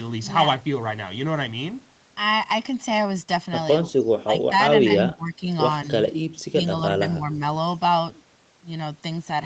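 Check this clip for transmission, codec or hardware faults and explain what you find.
One fault turns up: speech suppressed in double talk. The speech dips four times: at 4.19–4.52 s, 5.13–5.46 s, 6.52–6.58 s and 7.15–7.38 s. The first two drops reach about 20 dB, the third about 15 dB, and the last only about 5 dB. The sound thins and partly drops out, then recovers. The likely cause is an echo canceller facing both sides talking at once. It could not tell this talker from the loudspeaker echo, so it turned both down.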